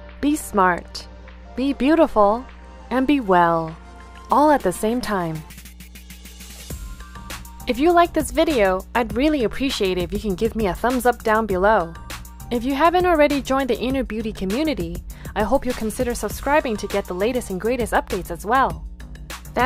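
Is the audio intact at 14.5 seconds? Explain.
No, not quite. Mains hum runs under the whole clip, 14.5 s included: a steady 60 Hz tone with a few low harmonics, sitting roughly 20 dB below the sound. It's what you get when a ground loop or nearby transformer leaks the power line into the signal.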